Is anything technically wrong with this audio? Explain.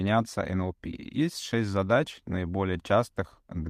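No, the speech signal shows no technical faults anywhere in the recording.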